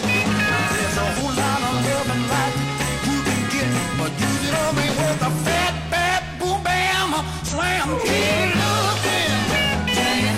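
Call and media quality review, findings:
Damaged data in a compressed stream, 1.16–1.22 s, 4.46–4.52 s, 7.48–7.54 s, 9.43–9.47 s: brief chirp or blip each time. The decoder misreads corrupted frames, loses sync and skips ahead to the next valid frame header.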